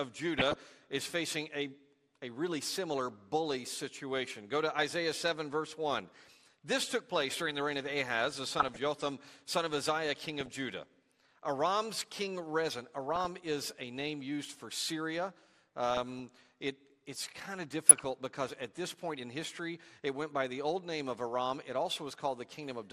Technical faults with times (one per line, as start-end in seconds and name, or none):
0.00-22.93 MP2 compression
0.38-0.56 DAB burbling
8.59-8.77 DAB burbling
17.89-18.05 DAB burbling